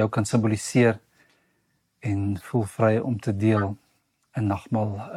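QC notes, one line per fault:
2.37–2.41 s, corrupt frame decoded: a faint glitch lasting about 40 ms. Flipped bits in the compressed data gave the decoder wrong gains and codes. It played the damaged frames anyway, so energy landed at the wrong frequencies. The length fits about three frames.
3.56–3.63 s, corrupt frame decoded: a much louder glitch lasting about 70 ms. The same misdecoding is at work here, probably across a couple of frames.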